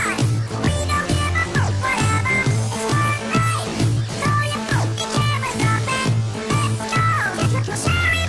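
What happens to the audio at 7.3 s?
Nothing goes wrong at 7.3 s; the audio plays through that moment intact, with no dropout, click or distortion to be heard.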